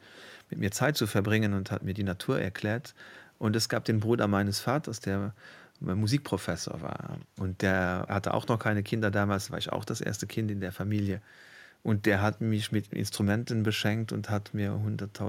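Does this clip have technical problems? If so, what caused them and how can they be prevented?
No, nothing in this speech recording points to a technical fault, so there is no cause to trace and nothing to prevent.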